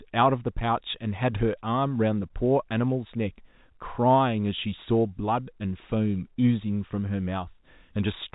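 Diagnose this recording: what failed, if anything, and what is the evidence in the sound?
Nothing failed in this recording, and the sound gives no evidence of any fault.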